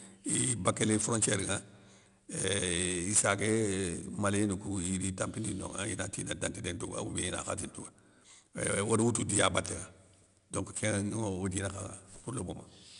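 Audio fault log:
throughout: 4-bit ADPCM compression. Each sample is coded as a coarse 4-bit step from a prediction, so a gritty hiss rides on every loud stretch of speech and sharp onsets distort. Nothing is present above 10.6 kHz, which fits a stream near 89 kbps.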